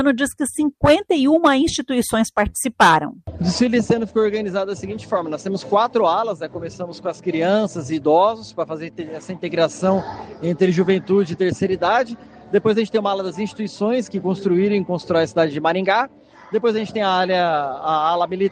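No technical faults can be heard anywhere in this audio.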